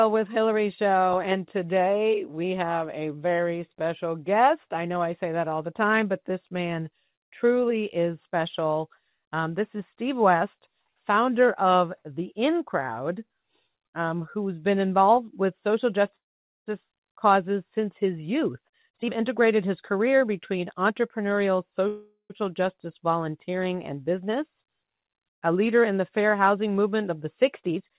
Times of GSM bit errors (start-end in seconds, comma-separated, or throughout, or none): none